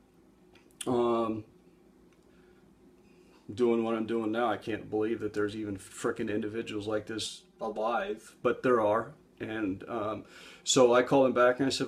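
From 7.26 to 8.26 s the sound turns hollow and phasey, the signature of channel delay (comb filtering): one channel lags the other by roughly 5 ms, and summing to mono cancels shared content in evenly spaced notches, the first near 100 Hz.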